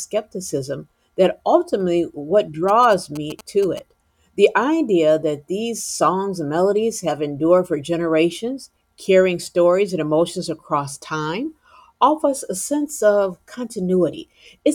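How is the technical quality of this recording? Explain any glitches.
The recording has one glitch. GSM signalling bursts appear from 2.69 to 3.79 s, just after "that ultimately what". A nearby 2G phone sent brief radio bursts while signalling. The audio circuitry rectified them into a galloping dit-dit-dit of short 217 Hz buzzes, sitting somewhat below the speech.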